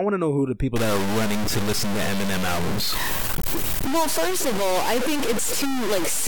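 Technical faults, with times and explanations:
0.76 to 6.27 s, low bit depth without dither: from 0.76 s to the end, the speech turns harsh and grainy, with a rasp that rises and falls with the talking. Quiet stretches crackle or cut out, and the distortion sits roughly as loud as the speech itself. The likely cause is samples cut down to very few levels, about 3 bits, with no dither, so the rounding error tracks the waveform and is heard as distortion rather than steady hiss.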